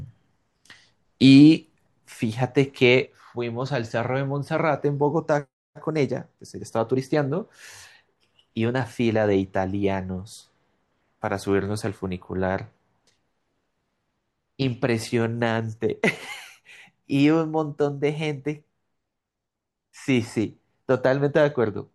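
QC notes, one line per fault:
3.06 s to the end, one channel drops out: the speech falls abruptly by about 6 dB and stays at that lower level for the rest of the clip. The drop is a clean step, with no fade and no change in tone. This likely comes from one stereo channel going silent before the mono sum. The material shared by both channels then arrives from only one side, which halves its amplitude. Anything carried only on the lost side vanishes completely.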